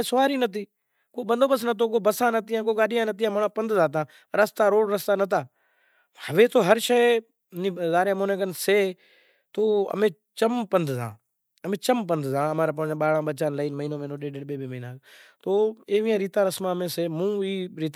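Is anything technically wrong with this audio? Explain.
No, nothing technically wrong stands out in this speech recording. No working path needs comment here, and no fault appears anywhere in the recording.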